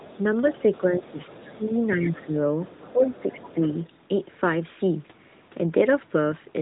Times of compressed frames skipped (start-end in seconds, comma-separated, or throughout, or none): none